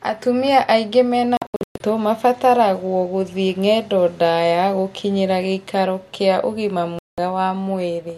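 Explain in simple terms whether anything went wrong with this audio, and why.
Digital broadcast dropout hits twice. After "aingĩ mena", 1.37 to 1.81 s, the speech breaks into short silent holes. After "gũkinyĩra gĩikaro kĩa ũgima", 6.99 to 7.18 s, it cuts out again. The receiver got bad data and went silent until good signal returned.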